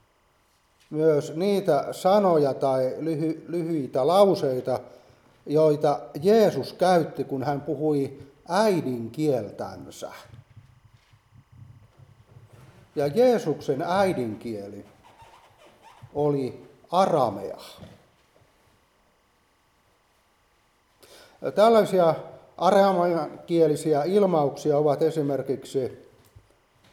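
From the first second to the last there's timecode bleed sitting quietly under the sound: a faint, steady chirping warble, roughly 45 dB down. What's happened is that linear timecode running at 25 frames per second has leaked in from an adjacent track or cable. Its square wave keeps flipping between tones around 1 and 2 kHz, and that constant switching is what gives the chirp its busy, rhythmic texture.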